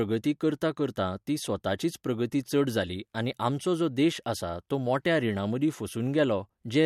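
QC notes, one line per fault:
No faults to note.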